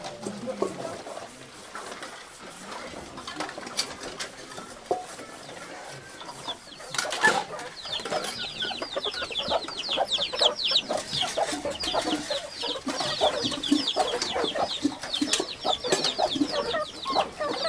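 No technical faults are audible.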